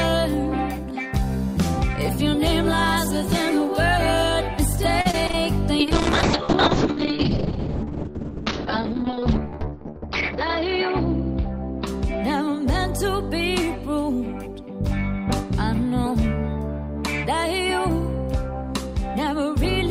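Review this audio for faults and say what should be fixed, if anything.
Repeated packet loss (robotic sound) runs from 5.01 to 5.35 s. Within that third of a second there are four short holes. The longest is about 36 ms, and together they remove about 60 ms of sound. Each hole was covered by stretching the last bit of audio forward, which adds up to about 96 ms of patched sound. That is close to 29 percent of the stretch, which is why it sounds choppy. A larger jitter buffer and stronger loss protection, such as forward error correction, on the network path would prevent it.

A call bitrate drop follows from 5.81 to 12.93 s. Part way in, the top of the spectrum collapses. Content that reached up to 20 kHz is now cut off near 6 kHz, and what remains is coarse and watery. This fits the encoder being pushed from about 48 kbps down to roughly 6 kbps after the bandwidth estimate fell. The sound stays at its worst for about 4.35 s. 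Setting a higher minimum bitrate and smoothing the congestion controller's reaction would keep the codec out of this reduced-bandwidth mode.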